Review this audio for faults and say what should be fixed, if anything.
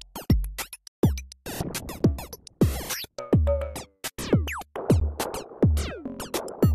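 Two silent holes with hard edges cut the sound at 1.99 s and 5.0 s, lasting 10 ms and 13 ms. This is a gap between stream segments. The timestamps of adjacent 1-second segments don't meet, so the player fills the space with silence. Align segment timestamps so each segment begins exactly where the last ends.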